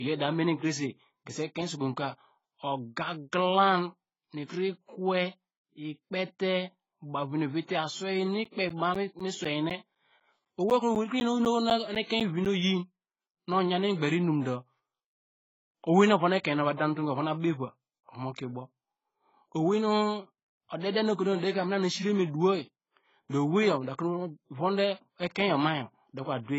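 A speech recording, dull and smeared from start to finish. Nothing is heard above 7.6 kHz. Sibilants fizz and sustained sounds warble. That points to heavy damage from AAC compression, likely AAC-LC at a very low bitrate near 16 kbps. From 8.44 s to 12.46 s, periodic USB or driver dropouts cause regular ticks every 0.25 s, roughly fifteen of them. Each one cuts out around 10 ms of audio and replaces it with silence. Something is blocking the audio stream on a fixed schedule.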